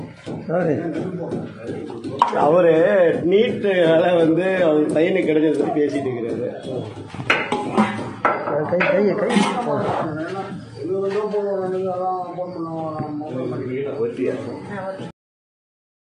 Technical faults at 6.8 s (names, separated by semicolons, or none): none